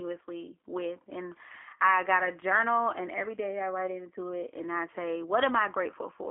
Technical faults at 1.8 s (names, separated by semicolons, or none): G.729 codec